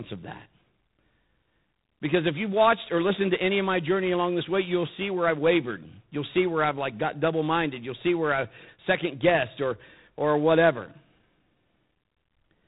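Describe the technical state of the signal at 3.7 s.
At 3.7 s you're hearing G.726 ADPCM damage, which runs through the whole clip. The speech has that harsh, rasping hiss riding on its level, which points to the 24 kbit/s mode, coarse differences from the predictor. Nothing gets through above 3.8 kHz.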